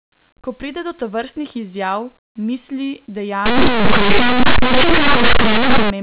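From 3.46 to 5.90 s, it's linear audio read as companded: 8-bit samples decoded as mu-law, so some near-zero values jump to harsh, very loud distortion.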